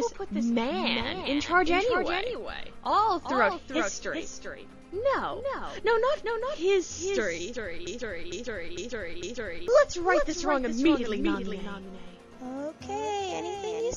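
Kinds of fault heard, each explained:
Doubled audio track: A second, full-band copy of the whole sound runs about 400 ms behind the original and roughly 5 dB quieter, for the entire clip. It is most likely the same signal reaching the mix twice, through a slower second capture path or two misaligned copies in an edit. Unlike an echo or room reverb, there is only one repeat, with no decay, no tail and no change in tone.
Broken-record loop: From 7.87 s to 9.68 s, one 453 ms fragment repeats back to back, four times in total, and whatever should have played during those 1.8 seconds is gone. The likely cause is a player, encoder or stream that stalled and kept re-sending the last piece it held. It differs from the doubled track because the repeats are identical and consecutive, and they replace the audio rather than overlaying a delayed copy on top of it.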